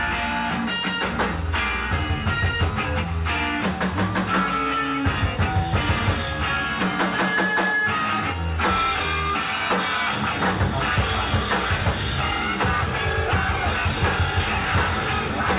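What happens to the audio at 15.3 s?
The sender's voice detector likely judged the last bit of sound as background and stopped transmitting, so the receiver filled the gap with comfort noise. This sound dropped by the voice detector runs from 15.28 to 15.30 s, about 20 ms, right at the end of the clip. For that moment the sound gives way to steady noise or near silence. It passes through a G.711 call path that carries nothing above 4 kHz.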